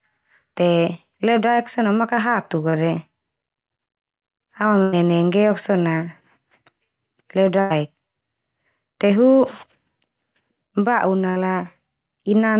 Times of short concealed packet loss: 2.70-2.75

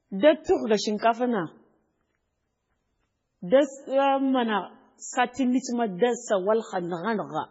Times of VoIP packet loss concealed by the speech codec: none

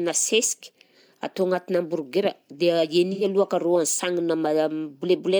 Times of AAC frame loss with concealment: 3.12-3.24

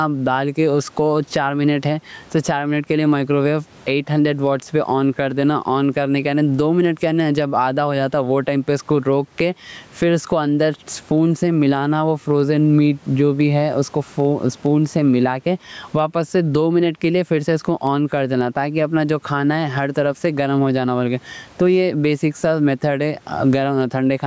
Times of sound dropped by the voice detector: none

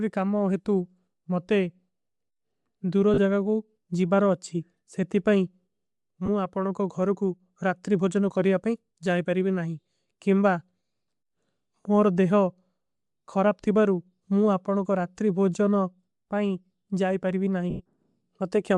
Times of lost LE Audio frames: 3.14-3.19, 6.26-6.28, 17.70-17.82

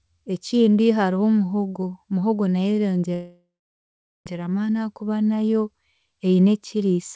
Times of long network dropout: 3.14-4.28

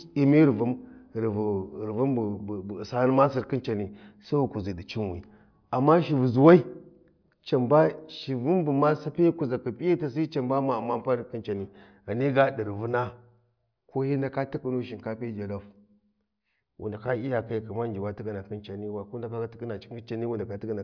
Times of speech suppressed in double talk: none

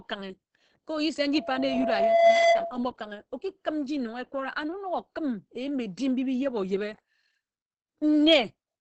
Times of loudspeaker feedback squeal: 1.33-2.83

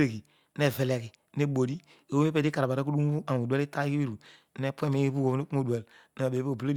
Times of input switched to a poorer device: none

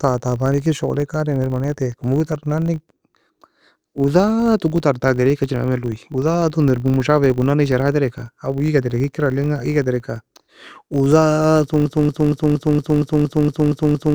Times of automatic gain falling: none

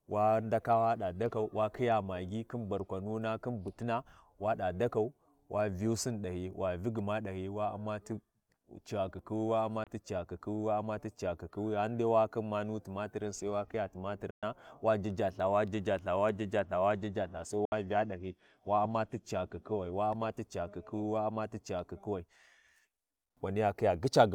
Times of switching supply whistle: none

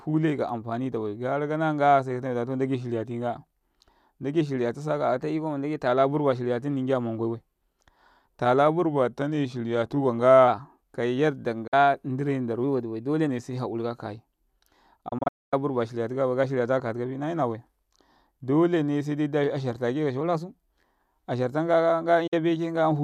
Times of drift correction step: 5.18-5.87, 8.83-10.48, 12.64-13.29, 20.21-20.85

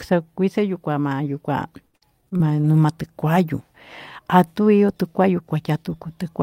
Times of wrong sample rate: none

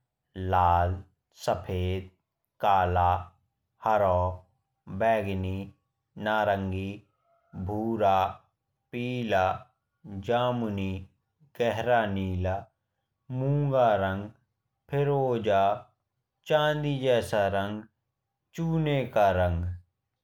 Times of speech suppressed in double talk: none

